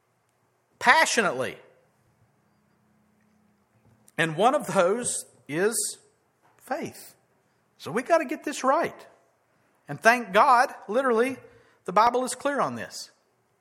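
At 12.07 s, between "literally the" and "is clear", an overlap between stream segments trims 17 ms of real sound, heard as a tiny skip and seen as a sudden waveform jump.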